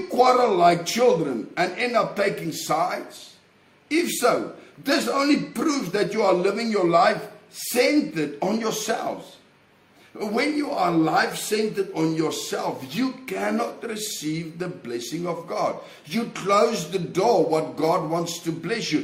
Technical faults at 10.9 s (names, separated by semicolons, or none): none